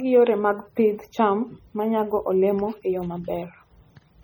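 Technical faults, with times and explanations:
Throughout, MP3 compression: the speech has a heavy watery, swirly quality, with metallic chirps on s sounds and smeared consonant onsets as weak frequency lines blink on and off between frames. That's likely a starved MP3 encode, fitting something around 32 kbps.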